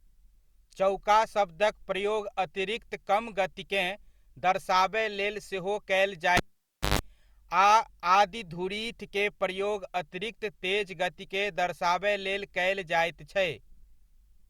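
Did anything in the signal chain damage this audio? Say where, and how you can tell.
Yes, at the analogue wiring stage. Right after "लेल सेहो कयल", a cable pulled and plugged in back in while live damages the speech from 6.37 to 6.99 s. A pop opens a gap of about 0.57 s of near silence, including 0.14 s of 50 Hz mains buzz as only the plug tip makes contact, then a second pop as the sound returns. On a spectrogram, each pop is a thin broadband vertical line, with a dark band between them and horizontal stripes at 50 Hz harmonics. On the waveform, the pops are spikes around a flat line.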